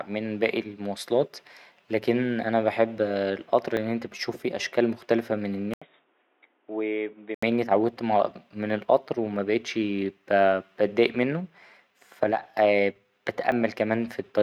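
A small jump in the speech lands at 3.77 s, between "لكن أنا بحب القطر" and "لأن أنت بتشوف فيه", and again at 13.52 s. Each is likely a dropped buffer (overrun), where roughly 10 ms and then 20 ms of audio was overwritten before being read, so the two sides butt together. From 5.74 to 7.43 s, after "فيه أشكال مختلفة من", a brief 80 ms gap leads into dull, boxy speech roughly 10 dB quieter, with new background noise around 35 dB down. This is likely the input switched to a poorer device for that stretch.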